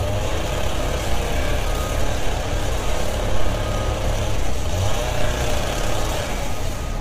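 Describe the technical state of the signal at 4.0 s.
Low-delay AAC compression is audible at 4.0 s, as it is across the whole clip. The codec likely responsible is AAC-ELD, which codes audio in very short frames to keep delay down. Short frames split frequencies coarsely, so at a low rate, which fits roughly 24 kbps here, the sound turns heavily rough and grainy, with noise smeared between tonal components. The top band is thinned, and nothing is present above 18.8 kHz.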